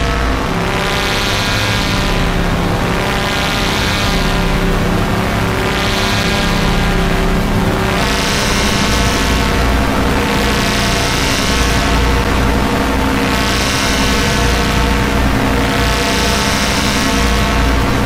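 Two brief hard-edged dropouts to silence break the sound, one at 6.23 s and another at 12.24 s, each lasting only a few milliseconds, about 7 ms and 8 ms. They land exactly 6 s apart, matching a 6 s segment length, which identifies them as gaps between stream segments. The time stamps at each segment boundary leave a small hole, and the player fills it with silence. Nothing is lost, but the clip runs slightly longer.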